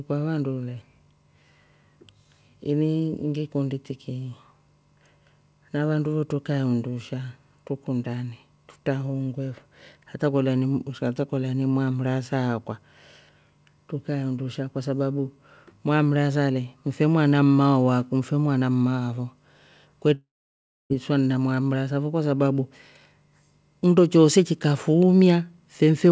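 Right around 20.14 s the speech breaks off, and what you hear until about 20.92 s is the last bit of sound smeared into a short, fading buzz before it drops to silence for roughly 0.64 s. That's most likely a long network dropout: packets stopped arriving, the receiver papered over the gap briefly, then gave up. About 0.76 s of speech is simply gone, and it picks back up at "na mwamrasa fo kwasababu", still band-limited to 8 kHz by the G.722 call path.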